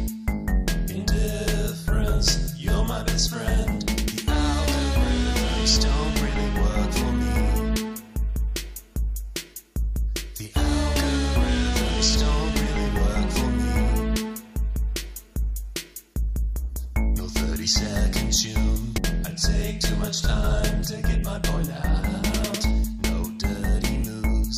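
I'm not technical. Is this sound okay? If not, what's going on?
No. At 18.96 to 18.98 s there is a very brief glitch caused by damaged data in a compressed stream. A small piece of the stored file was wrong, so the player couldn't make sense of it and produced a brief glitch while it found its place again.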